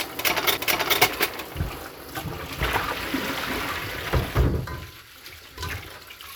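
A recording of sounds with one CD skip at 0.57 s. A brief tick and a near-instant mute, only a few milliseconds, break the playback. The laser has jumped tracks, so the sound resumes from a different point on the disc.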